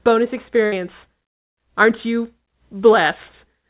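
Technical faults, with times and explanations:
0.66–0.74 s, burst of packet loss: the speech briefly freezes into a held, fading buzz or hiss, then jumps ahead with about 60 ms missing. Consecutive packets were lost, so the receiver stretched and faded the last sound for about 60 ms before playback resumed.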